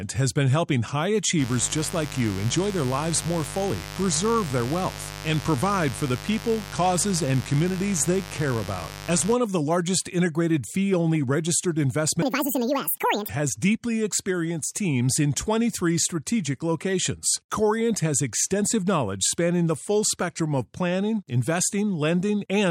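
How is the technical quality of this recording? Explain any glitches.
The recording has two clear faults.

From 1.36 to 9.36 s there is mains buzz: switching spikes repeating twice per 50 Hz cycle add a steady, raspy buzz about 15 dB below the speech. On a spectrogram this shows as evenly stacked harmonic lines up to several kHz.

From 12.22 to 13.29 s there is a section at the wrong speed. The speech runs twice as fast and sounds high and hurried, raised by roughly ten semitones, likely from playback against the wrong clock. On a waveform the syllables look compressed, and on a spectrogram the formants shift upward.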